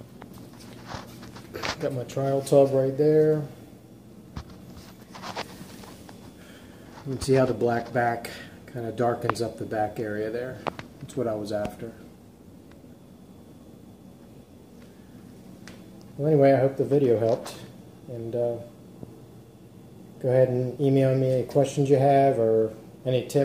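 No technical faults can be heard anywhere in the recording; the signal holds steady throughout, with no disruptions or defects at any point.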